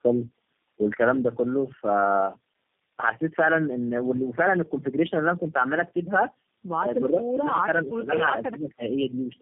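Tandem speech coding runs through the whole clip. The speech sounds rough, muffled and warbly, with nothing above 3.7 kHz. That points to about three low-rate speech codecs in a row, likely AMR-NB twice and then G.729A, each re-encoding the previous one's damage.

Speech suppressed in double talk appears at 7.63 to 7.67 s, 7.83 to 8.09 s and 8.4 to 8.82 s. The speech dips in level, by roughly 10, 15 and then 20 dB. The likely cause is an echo canceller that, with both sides talking, couldn't tell this talker from echo and turned everything down.

Echo leak appears from 8.54 to 8.62 s, inside the last dip. A faint delayed copy of the speech trails by 272 ms, about 35 dB below it. It is likely residual loudspeaker echo that the far end's canceller failed to remove and sent back.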